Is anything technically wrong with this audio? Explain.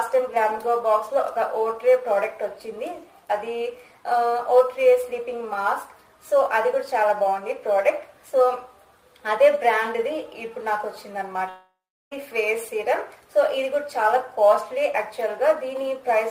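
Yes. From 11.49 to 12.13 s there is a long network dropout, likely a delivery stall. The last sound smears into a fading buzz, then about 0.37 s of silence. Unlike a brief concealed glitch, about 0.62 s is lost and the audio resumes skipped ahead.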